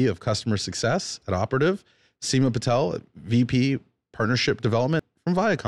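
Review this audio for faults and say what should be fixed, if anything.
At 1.39 s a corrupt FLAC frame gives a short error peaking at about -30 dBFS. Flipped bits derailed the decoder's prediction from the damaged bit on.

From 4.90 to 4.99 s, compressed frames were skipped. Roughly a tenth of a second of speech is missing.

Enable CRC checking in the FLAC decoder and verify file integrity before playback so damaged or missing frames are caught and concealed.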